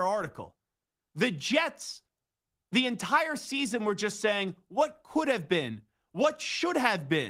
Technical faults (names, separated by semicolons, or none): none